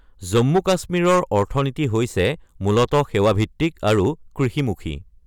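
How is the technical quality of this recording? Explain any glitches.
The recording is marred by one persistent fault. Hard clipping runs throughout the speech: the signal is driven about 10 dB past what the chain can pass, so a small share of samples, around 2 percent, have their peaks sliced flat, adding high harmonics heard as crackle on louder moments.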